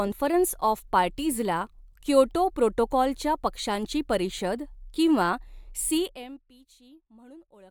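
A speech recording where, from 5.89 to 6.51 s, just after "च्या पक्षांची परिषद किंवा", a fast ticking zipper noise rides on the speech as its level falls by roughly 25 dB. The fade is applied in unsmoothed 1 dB steps, about forty per second, and each step leaves a small click.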